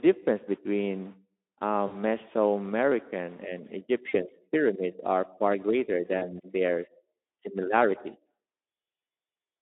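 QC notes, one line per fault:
1.87–1.96 s, 4.09–4.16 s and 6.17–6.28 s: VoIP packet loss concealed by the speech codec. About 40 ms of speech went missing each time, which fits two dropped 20 ms frames. The Speex decoder bridged each gap by extending its last pitch and filter at falling gain, so the narrowband sound briefly smears into a buzzy tone or coloured noise that fades, and stays thin just after.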